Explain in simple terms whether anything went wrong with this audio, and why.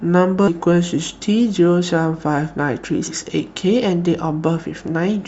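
Compressed frames skipped at 0.47 s and 3.07 s: the speech jumps forward, losing about a fifth of a second, then about a tenth, which fits whole 20 ms frames going missing or being rejected as damaged.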